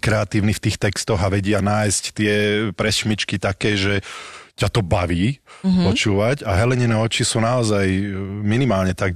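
A speech clip with a brief stutter at 4.32 to 4.39 s, where a 70 ms stretch of sound plays twice in a row. This is repeated frames: a short run of compressed frames, which fits about three frames, was decoded again, lengthening the audio by 70 ms.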